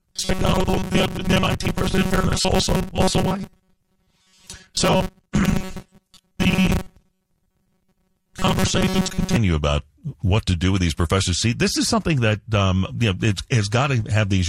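From 0.01 s to 9.36 s the speech has robotic sound from repeated short buffers. It becomes a rigid, metallic buzz pitched at 188 Hz. The words still come through roughly. The cause is likely audio arriving too seldom, so playback loops the last scrap of sound instead of the real signal. A 188 Hz buzz points to repeats about 5.3 ms long. Most of the sound in this stretch seems to be repeats.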